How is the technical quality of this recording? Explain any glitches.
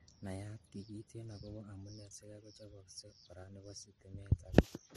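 The recording is degraded for its entire length by stacked compression damage. Transcoding between lossy codecs runs throughout: the speech was likely encoded as low-bitrate MP3 and then re-encoded as Vorbis, which spent scarce bits re-coding the first codec's artefacts while adding its own. Nothing survives above 13.2 kHz, giving a dull, doubly processed sound.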